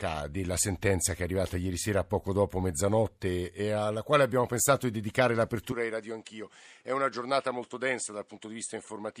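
At 5.72 s, right after "abbiamo pensato di dedicare", the speech turns duller and boxy with no gap, and stays that way to the end. The likely cause is the input switching to a poorer device. On a spectrogram, energy above 9.9 kHz vanishes at that instant. The waveform shrinks by around 5 dB, and a new noise floor appears some 40 dB below the speech.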